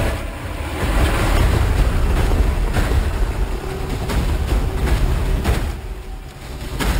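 Throughout, there's imaging from sample-and-hold upsampling: a metallic fizz at 6 to 12 kHz, about 22 dB down, which fits 12 kHz audio stepped up to 48 kHz.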